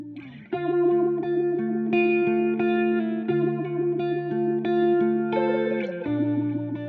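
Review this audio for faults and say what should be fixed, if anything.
Nothing here needs fixing; I listened closely and didn't hear a single fault worth flagging.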